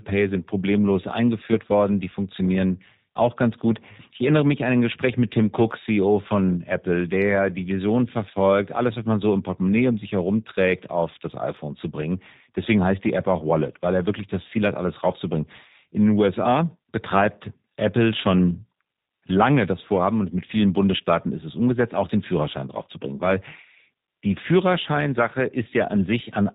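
From start to finish the speech sounds band-limited, slightly rough and synthetic, with nothing above 4 kHz. This is plainly audible G.729 codec damage: the sound is rebuilt from a vocal tract filter, a pitch predictor and sparse pulses, which fits G.729A at 8 kbit/s.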